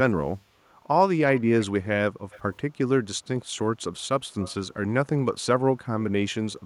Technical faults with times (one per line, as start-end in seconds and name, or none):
1.27-1.66 echo leak
2.30-2.56 echo leak
4.39-4.68 echo leak